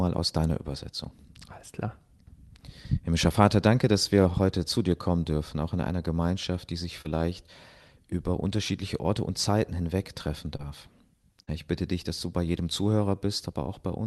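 At 7.01 to 7.07 s, just after "die sich", there is a short concealed packet loss: about 40 ms of the call audio never reached the decoder in time. The receiver bridged roughly 32 ms of it by extending the preceding sound, then cross-faded back into the real signal. The result is a brief smear in the sound. A second short concealed packet loss follows at 10.57 to 10.61 s, right after "hinweg treffen". This gap is shorter, about 20 ms missing with around 21 ms synthesised, and it comes across as a brief wobble.

At 11.43 to 11.49 s, immediately before "ich bitte dich dass", a burst of packet loss removes about 40 ms of audio. The decoder stretched the last received sound across roughly 45 ms and faded it down as the gap continued, so a held buzz or decaying hiss is heard before the sound resumes further along. Throughout, the Opus call path limits the audio to about 12 kHz.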